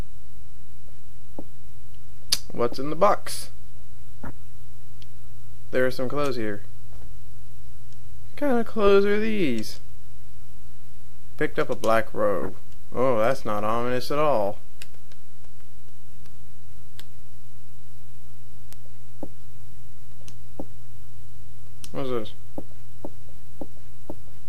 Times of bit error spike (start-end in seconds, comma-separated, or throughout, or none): 13.24, 18.73